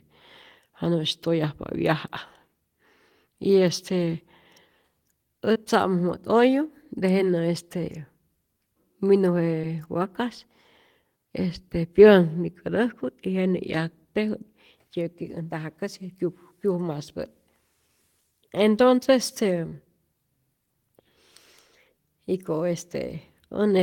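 Short concealed packet loss occurs three times, at 5.53 s, 9.61 s and 19.69 s, the last just after "entonce este". Each time about 20 ms of the stream arrived too late to decode. The receiver papered over the gap by extending the preceding sound for roughly 18, 19 and 25 ms, then crossfaded back into real audio. Each one is heard as a brief smeared wobble, and a short consonant can drop out.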